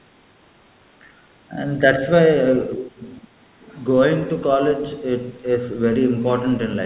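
A speech clip carried over a call link, with nothing above 4 kHz, which fits narrowband G.711 mu-law. The voice dips sharply from 2.76 to 3.02 s, by around 20 dB, and more mildly from 3.21 to 3.28 s. This is speech suppressed in double talk, likely an echo canceller ducking both talkers at once. From 3.61 to 3.81 s, a faint second voice leaks through, roughly 30 dB below the speech. It is the other side's voice leaking through from the loudspeaker, likely left over by incomplete echo removal.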